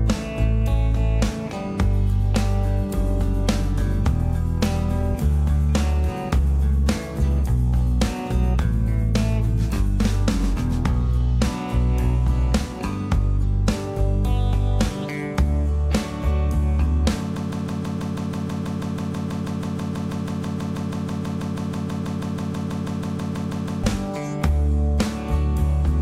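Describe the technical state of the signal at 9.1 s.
At 9.1 s the signal is intact, with no audible fault at that moment.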